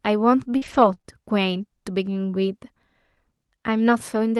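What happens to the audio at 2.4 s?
Nothing goes wrong at 2.4 s: the speech carries straight through that moment intact, with only the ordinary coding of the Opus call path and its upper limit of about 12 kHz.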